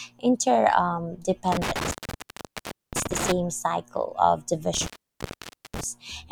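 Intermittent contact at 1.52–3.32 s and 4.74–5.84 s: a loose connection opens for about 1.02 s, then 0.88 s, cutting the speech out with crackle at each break.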